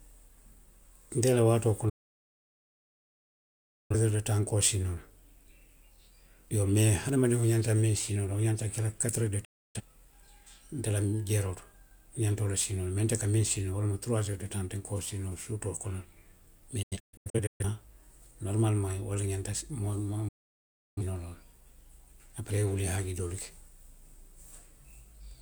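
At 1.89 s, just after "la waatoo", the speech mutes in a digital broadcast dropout lasting about 2.0 s and resumes at 3.96 s on "de taŋ nka". The receiver stopped getting valid frames and muted, with an 8 ms fade, until clean data returned. Anything sent during the gap is gone. Similar mutes follow at 9.44–9.81 s (0.3 s), at 16.82–17.65 s as scattered holes totalling 0.47 s, the longest 128 ms, and at 20.28–21.02 s (0.68 s).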